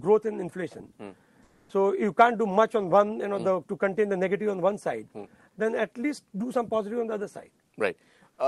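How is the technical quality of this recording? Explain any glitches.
One glitch stands out, in a recording that has passed through a call codec whose top end stops at about 12 kHz. From 1.43 to 1.69 s, roughly a quarter of a second, the background texture drops out and a smooth, featureless hiss takes its place. It is barely quieter, by about 1 dB, against a background sitting about 38 dB below the loudest passages. This is comfort noise in place of the background, likely from discontinuous transmission. The sender's detector judged the moment silent and stopped sending audio, so the receiver filled the gap with generic noise shaped to match.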